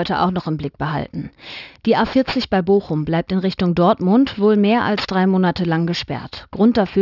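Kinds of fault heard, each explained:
Aliasing: content above 6 kHz folds back unfiltered, fitting a drop to a 12 kHz rate, so sibilants turn gritty and metallic, about 20 dB down.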